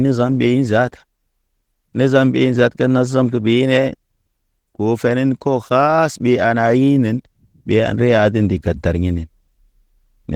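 From start to finish the speech carries plainly audible Opus voice compression, consistent with about 16 kbps in hybrid mode. Content stays fullband up to about 20.2 kHz, but the coarsely coded excitation leaves the voice hoarse and slightly robotic, coded in 20 ms frames.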